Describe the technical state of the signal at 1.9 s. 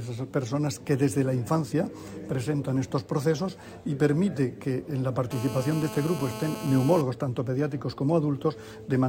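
The signal at 1.9 s is intact, with no audible fault at that moment.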